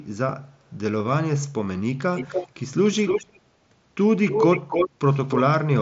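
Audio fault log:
2.15–2.63 s, 2.85–3.4 s, 4.25–4.9 s and 5.28–5.42 s, echo leak: the far end is likely playing the call on a loudspeaker, and its echo canceller lets part of the returned signal slip back. A second copy of the speech follows the original about 294 ms later, a few decibels quieter and roughly as loud as the direct speech at 4.25–4.9 s. Over the Bluetooth mSBC headset band, which ends near 7.7 kHz, it sounds like a delayed doubling.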